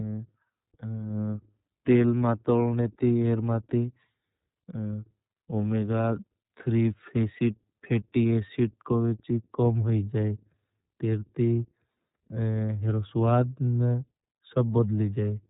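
The speech has been passed through the iLBC codec for its whole length, a narrowband VoIP coder that encodes each frame's excitation on its own, with the roughness fitting 30 ms frames at about 13.33 kbps. Nothing above about 3.8 kHz survives, so sibilants and breath lose their brightness, and the coding damage is plainly audible as a grainy, slightly synthetic edge on every syllable.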